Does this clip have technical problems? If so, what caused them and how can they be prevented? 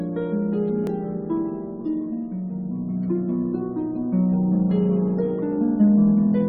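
Yes. At 0.87 s, an overlap between stream segments makes the player discard about 15 ms of genuine audio where two segment time stamps collide. The result is a small click or skip. The waveform shows an abrupt discontinuity, and the spectrogram shows a thin vertical broadband streak. Prevent it by writing segment time stamps so that each segment starts exactly where the previous one ends.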